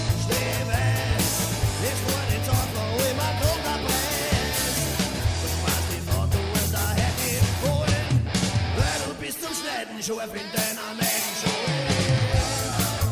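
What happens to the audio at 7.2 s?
At 7.2 s the audio carries on without any audible fault.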